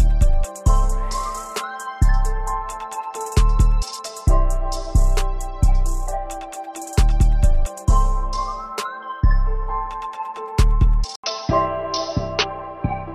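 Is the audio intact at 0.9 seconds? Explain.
Yes, the audio is intact at 0.9 seconds, with no dropout, click, distortion or other fault at that point.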